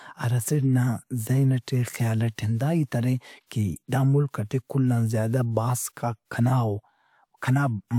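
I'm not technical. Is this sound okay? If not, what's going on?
Yes, nothing here sounds wrong.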